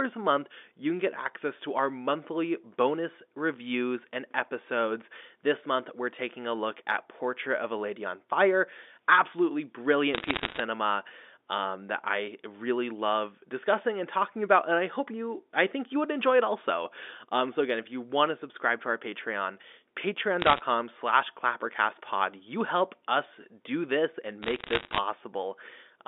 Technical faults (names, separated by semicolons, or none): bit errors on a digital phone line